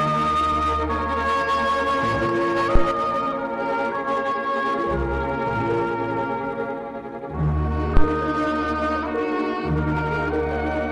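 A supply step on the live input, switched phantom power passing through the coupling capacitors, causes a phantom power thump at 2.75 s and again at 7.97 s: a deep low thud peaking near about -4 dBFS, dying away within roughly 28 ms the first time and 23 ms the second.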